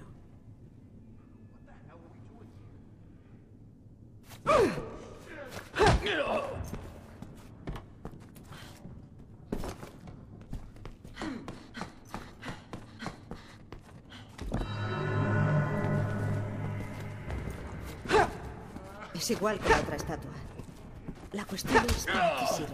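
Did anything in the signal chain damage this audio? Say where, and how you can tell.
No, I can hear no damage from any stage of the signal chain anywhere in the clip.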